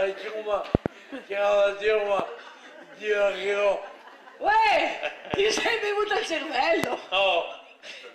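At 0.75 to 0.88 s a loud pop arrives as a double, two sharp clicks in quick succession peaking roughly 25 dB above the sound. Single pops follow at 2.19 to 2.22 s and 5.34 to 5.36 s, each about 15 dB up, and at 6.84 to 6.86 s, about 20 dB up. The sound continues underneath each one. The likely cause is a brief voltage pulse from a switch, connector, static discharge or driver glitch entering the signal path.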